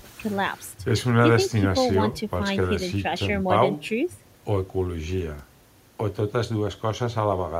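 No dropouts, clicks, distortion or level jumps turn up anywhere in this speech recording; nothing to flag.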